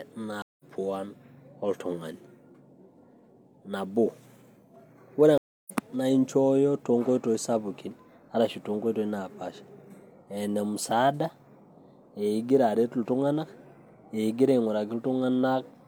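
A speech clip where the stream twice suffers a stream reconnect: the connection dropped and the player restarted its decoder mid-stream. At 0.42–0.64 s, 171 ms of silence precedes audio resuming about a tenth of a second later; at 5.38–5.72 s, 294 ms of silence, resuming about 0.3 s on.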